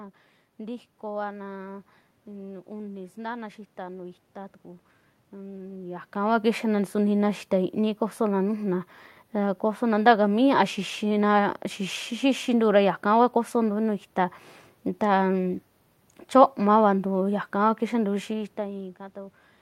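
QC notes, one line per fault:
No system faults heard in this speech recording.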